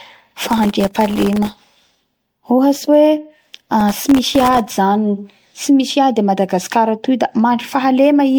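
Across the whole speech clip there is a swirly, hollow, smeared quality, and consonant attacks blur. This is likely generation loss. The sound seems to have been encoded as MP3 at 96 kbit/s around seven times. Each pass adds fresh quantisation noise and spectral holes.

From 0.49 to 2.27 s, and again from 3.81 to 4.67 s, gritty crackle rides on the audio. This is processor overload crackle. Many very short buffers, under a millisecond each, missed their deadlines. Each miss left a tiny silent gap with hard edges.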